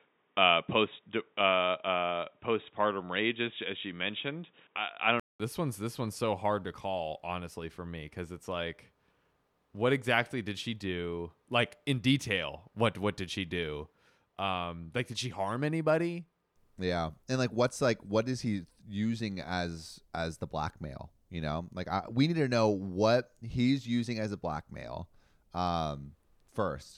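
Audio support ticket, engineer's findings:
0.0 to 5.4 s: band-limited, dull, boxy sound. Nothing above 3.8 kHz. Brief silence of 200 ms around 5.4 s, then full bandwidth returns. Level matches on both sides. Background noise sits well below the signal, about 50 dB down. Likely cause: input switched to a poorer device, a narrowband microphone or headset call profile, before the system moved to the main input. Mechanism: different capture path, narrower passband, gap while the stream reopened.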